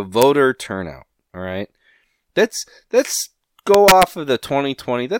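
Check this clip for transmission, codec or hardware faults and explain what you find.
Integer overflow is present, producing violent cracks sharply harsher than clipping: a brief snap at 0.22 s with the level right at the ceiling, then a run from 3.74 to 4.03 s with peaks about 4 dB over. Samples exceeding the integer limit wrapped to the opposite sign instead of being held at full scale.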